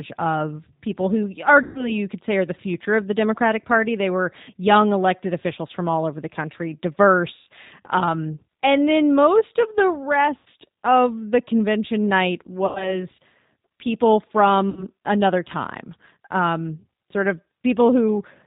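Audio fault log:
Throughout: G.729 codec. Speech is rebuilt at 8 kbit/s from a vocal tract filter, pitch predictor and sparse pulses, so it sounds plainly rough and synthetic. On a spectrogram, energy stops sharply at 4 kHz and harmonics look smeared and grainy.
1.63–1.93 s (after "of people who", before "you could say are"), 7.35–7.48 s, 10.37–10.48 s, 12.66–13.04 s (after "of the convention night"), 14.70–14.85 s (before "another time um sort"): VoIP packet loss concealed by the speech codec. Gaps of 120, 120, 90, 90 and 60 ms, fitting runs of two to four lost packets, are filled by repeating the last pitch and filter at falling gain. This gives a buzzy tone or coloured noise that fades, with weak recovery afterward. It shows as flat, stretched harmonics and a tapering waveform envelope.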